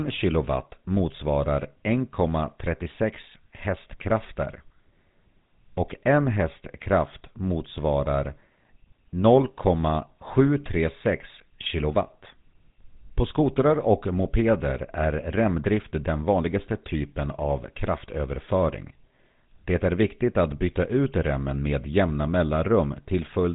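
Speech running through the GSM full-rate codec for its whole length, with nothing above about 3.8 kHz and a plainly audible buzzy, gravelly grain, which fits the 13 kbps full-rate mode. Unlike simple telephone band-limiting, that roughness comes from the coarse pulse excitation, not just the missing top end.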